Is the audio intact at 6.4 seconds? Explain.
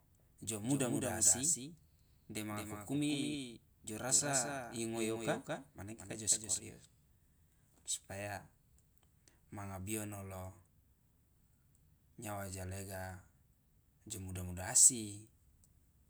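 No. A doubled audio track runs from the start until 6.6 s, likely from a second capture path or edit holding a copy about 200 ms late. That full-band copy, about 5 dB quieter, trails the speech with a dry, flat echo that cuts off abruptly.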